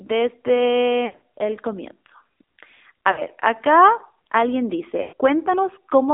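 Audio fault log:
Throughout: AMR narrowband mobile codec. The speech is squeezed into a telephone band of roughly 250 Hz to 3.7 kHz. At 7.4 kbps the pulse-driven vocal-tract model leaves it plainly buzzy and synthetic. A spectrogram shows a hard ceiling near 3.7 kHz, nothing below 250 Hz, and smeared harmonics.
1.06–1.22 s: lost AMR speech frames, just before "el comienzo". About 120 ms of frames are missing, scattered over 160 ms, with an 80 ms run at the longest. The decoder repeats the last pitch and vocal-tract shape at falling gain, so the sound smears into a warble and sags. The waveform shows the envelope dipping, and the spectrogram shows frozen, repeated formant bands.
3.12–3.22 s: lost AMR speech frames, just before "acá alguien". About 60 ms of frames are missing. The decoder holds the stale settings and fades them, so the sound gives a brief drawn-out warble. A spectrogram shows a short stretch of frozen spectrum, and the waveform shows a dip in level.
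5.02–5.13 s: lost AMR speech frames, just after "acá alguien". About 100 ms of frames are missing. The repeated, fading parameters stretch the sound and let it decay toward silence. The waveform shows the amplitude tapering away, and the spectrogram shows a static spectral slice dimming over about a tenth of a second.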